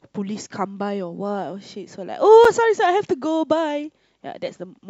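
At 2.45 s the speech breaks for a silence of about 7 ms, a gap at a join of encoded pieces: separately encoded segments were spliced untrimmed, leaving encoder delay and end padding. Unlike a dropout, nothing is lost; the sound resumes exactly where it stopped.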